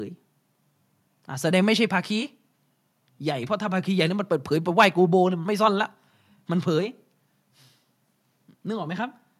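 No technical faults can be heard anywhere in this speech recording. There is nothing to report at any point in the audio.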